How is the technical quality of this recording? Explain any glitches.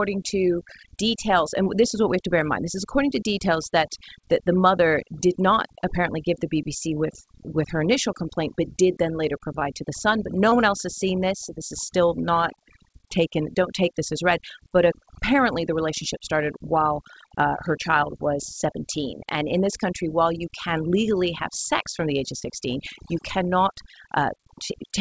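The technical quality is compromised by two problems: heavy-handed noise suppression across the whole recording and three brief dropouts in the speech. The call path itself is audible in a clause's worth: nothing reaches above 8 kHz, consistent with G.722 wideband coding.

Overdone noise removal runs from start to finish. The suppressor was set too aggressively, so every frequency band that sits close to its noise estimate gets pushed down hard or switched off. The quieter parts of the voice are removed along with the noise. The background collapses into near-silence sprinkled with twinkling, chirpy specks. Unlike the dull, even top-end loss of a bandwidth limit, this damage flickers and changes from moment to moment.

Short concealed packet loss occurs at 1.64 to 1.68 s, after "to details" and before "this is what we", and at 10.50 to 10.53 s, between "the son but no" and "one else has seen". 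It happens again at 22.39 to 22.43 s, just after "from the age of". Each gap corresponds to roughly one 20 ms packet arriving too late. The receiver covered it by extending the preceding sound and then cross-fading back to the real audio. The result is a brief smear or wobble lasting about 40 ms. It is localised and momentary, not the continuous damage of the noise suppression.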